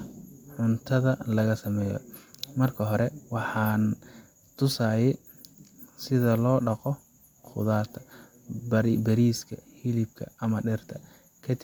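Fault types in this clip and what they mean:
No faults can be heard.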